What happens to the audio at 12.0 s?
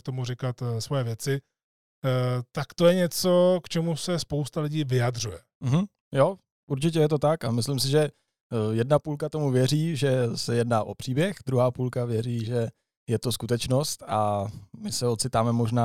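Nothing goes wrong at 12.0 s; the speech carries on intact through that moment with no audible fault.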